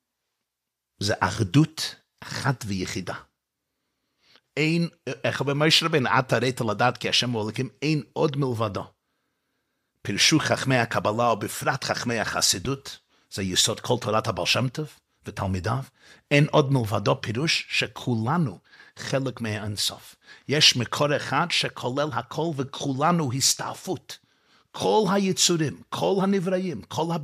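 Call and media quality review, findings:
Loud pop, 12.65–12.67 s: single sharp click-thump riding over the speech, which continues uninterrupted beneath it, peaking a few dB above the speech level. Likely cause a brief voltage step from a plug, switch, static discharge or driver glitch entering the chain, then shaped by downstream circuitry into a short transient pulse.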